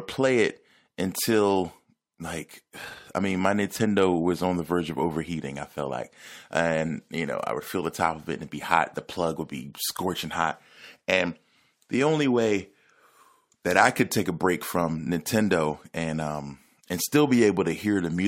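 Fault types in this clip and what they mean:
No technical fault can be heard anywhere in the speech recording, with the signal holding steady in level and continuity throughout.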